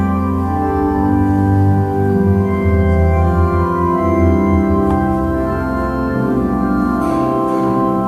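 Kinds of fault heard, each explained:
No technical faults can be heard anywhere in the audio. Nothing in the signal needs explaining as a defect.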